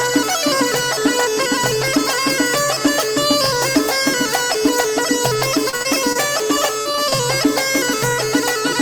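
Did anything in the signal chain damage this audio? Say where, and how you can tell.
Yes. Between 5.69 and 6.17 s, and again between 6.79 and 7.14 s, the sound turns choppy and robotic. Short chunks drop out, the longest about 41 ms and 37 ms, and the gaps are bridged by a buzzy smear of the preceding sound. This is repeated packet loss (robotic sound) at the network stage. Packets went missing or arrived too late in quick succession, and the decoder's concealment kept extending the last good audio to fill each hole. It patched roughly a quarter of the first stretch and over a third of the second.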